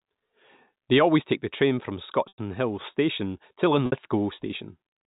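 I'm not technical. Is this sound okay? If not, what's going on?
No. There are two brief dropouts, a fault called packet loss with pitch repetition. Small pieces of the speech went missing in transmission. To fill each hole, the receiving end repeated the last bit of voice it had. That sounds like a short, buzzy held sound that fades away. The first comes at 2.28 s, right after "take the train from", and lasts about a tenth of a second. The second, at 3.86 s, is shorter, about 60 ms. The telephone-style coding, G.711, limits how bright the sound can be.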